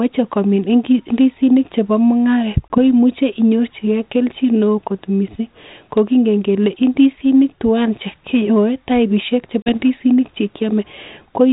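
Packet loss on an ADPCM call breaks the speech at 2.68 s, a 20 ms gap of about one packet, and again at 9.62 s, just after "twan chekiyoe taipisiek", losing 40 ms, about two packets. Each hole has hard edges. The decoder's predictor and step size lose track of the sender's, so the speech comes back slightly distorted, settling by 2.78 s and 9.76 s. A plain dropout would resume cleanly. The band-limited coding points to 32 kbit/s G.726.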